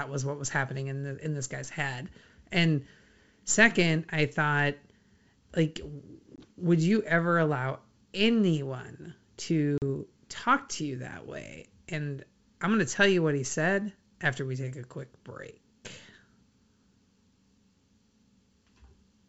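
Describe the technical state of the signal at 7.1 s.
At 7.1 s the speech is intact, carried cleanly through the G.722 wideband telephone coding, which at this quality points to the full 64 kbit/s mode.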